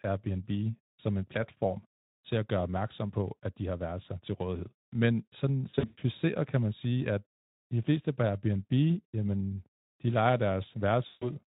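From 5.69 to 6.03 s, VoIP packet loss concealed by the speech codec breaks the speech. About 240 ms goes missing across 320 ms, the longest gap 120 ms. The decoder stretches the last sound into a fading buzzy tone or coloured noise. At 11.07 to 11.31 s, 140 ms drops out the same way, under the Speex coding.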